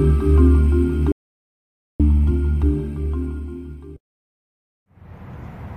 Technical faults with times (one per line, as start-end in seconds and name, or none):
1.12-2.00 audio dropout to silence